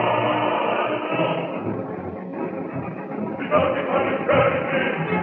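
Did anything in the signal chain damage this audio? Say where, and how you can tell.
No, nothing in the signal chain damaged this audio.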